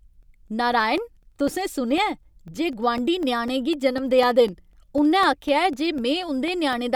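From 0.23 to 6.73 s, periodic USB or driver dropouts silence about a millisecond every 0.25 s: clockwork ticks during speech, unlike random crackle.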